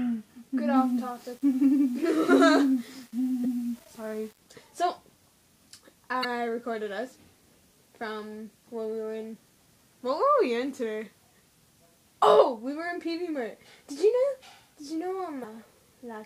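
From 0.76 to 4.38 s the sound turns grainy, with a gritty distortion that follows its level, roughly 30 dB down. This likely comes from low bit depth without dither, rounding that fits 8 bits. Brief glitches at 3.41 to 3.46 s, 6.21 to 6.25 s and 15.40 to 15.45 s are damaged data in a compressed stream, where the decoder misreads corrupted frames and must resynchronise.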